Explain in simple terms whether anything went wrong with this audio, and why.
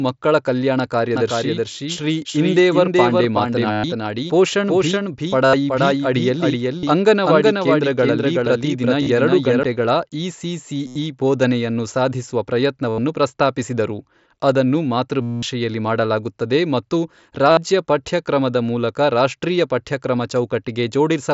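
Yes, two things went wrong. The first is a doubled audio track. Right after "ಮಕ್ಕಳ ಕಲ್ಯಾಣ", at 1.15 s, a second copy of the speech appears, trailing the original by about 0.4 seconds and a little quieter. It has no echo tail or room sound of its own, and it cuts in and out abruptly, ending at 9.63 s. The likely cause is the same signal being picked up again through a slower route, or an edit that left two copies overlapping out of step.

The second is concealed Bluetooth headset packet loss. Chunks of audio sent from the headset to the phone never arrived, so the phone filled each gap by repeating a recent slice of sound. That produces a steady buzzy tone with a slight wobble when real audio returns. It happens eight times: at 3.72 s (120 ms), 5.45 s (about 80 ms), 6.79 s (about 40 ms), 9.03 s (30 ms), 10.87 s just before "ಬೋಧನೆಯನ್ನು ಸಾಧಿಸುವ" (about 80 ms), 12.89 s (90 ms), 15.21 s between "ಪ್ರಸ್ತಾಪಿಸಿದರು ಅದನ್ನು" and "ಮಾಡಲಾಗುತ್ತದೆ ಮತ್ತು" (210 ms, the longest), and 17.51 s (60 ms). 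All of this comes through the headset's mSBC voice codec, which adds only a light graininess of its own.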